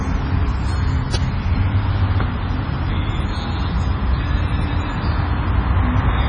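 Heavy compression damage runs through the whole clip, likely from MP3 encoding at a low bitrate. Nothing survives above about 9.9 kHz. Weak detail flickers in and out, so the sound turns watery and swirly. Sharp attacks smear. The damage fits roughly 24 kbps.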